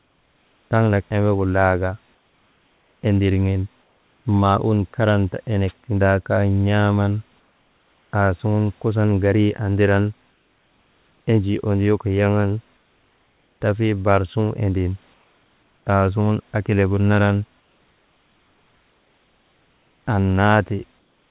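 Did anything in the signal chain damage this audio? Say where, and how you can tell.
Yes, the damage comes from the call processing stage, where the sender's voice detection and discontinuous transmission handle the pauses in this speech. Both faults sit inside a telephone-band path with nothing above 4 kHz, which fits G.711 mu-law.

Comfort noise in place of the background fills seven pauses: 0.0 to 0.71 s (just before "taŋnak embegu"), 2.15 to 4.25 s, 7.4 to 8.12 s, 10.31 to 11.27 s, 12.77 to 13.61 s (just before "tafii baar"), 15.14 to 15.86 s, and from 17.6 s to the end. The likely cause is that the sender stopped transmitting when it detected no speech, so the receiver generated its own noise. The real room noise gives way to a flat, featureless hiss about 2 to 4 dB quieter. You hear the texture change in these pauses.

The onset was clipped by the voice detector at 0.69 s, right before "taŋnak embegu". 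The detector likely reacted late to the returning speech, so about 20 ms at the start never got through and comfort noise filled that gap. The result is an abrupt first sound with no soft attack, jumping straight out of the synthetic hiss.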